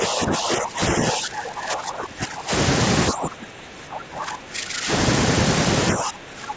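The speech repeatedly dips, by about 15 dB from 0.00 to 0.96 s and 1.12 to 2.52 s, then about 20 dB from 3.11 to 4.91 s and 5.94 s to the end. This is likely speech suppressed in double talk, with the echo canceller ducking the talker while the far side spoke.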